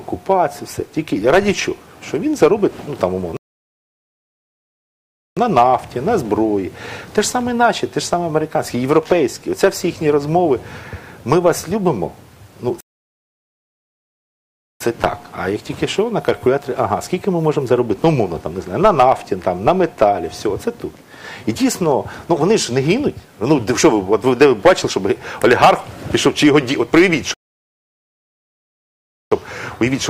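At 3.37, 12.81 and 27.34 s the sound cuts to silence mid-flow for about 2 s each time, then resumes: a playback stall, likely the player running out of buffered data or its output thread being blocked until it recovered.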